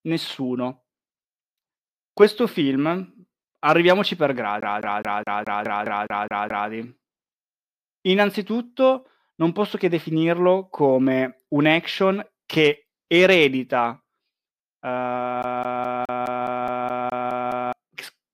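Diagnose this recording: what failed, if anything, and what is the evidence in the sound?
CD stuck on one turn, from 4.61 to 6.70 s just after "arriviamoci per", and again from 15.43 to 17.73 s: a playback fault. The same 209 ms of speech repeats 10 and then 11 times, with a brief mute at each jump, as a scratch kicks the laser back one track per rotation.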